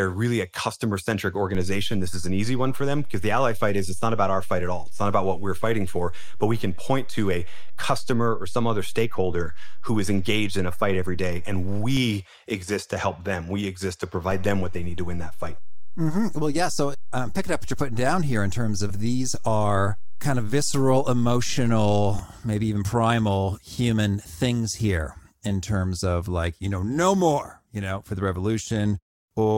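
A DC step occurs at 1.55 s, just after "really a customer centric", where the waveform's zero line jumps by about -22 dBFS and holds until 11.97 s, stepping back before "exist to help them". A second step of about -23 dBFS runs from 14.31 s, after "them we exist to", to 22.19 s, ahead of "maybe even primal human". Each jump and return is heard as a low thump while the speech carries on unchanged.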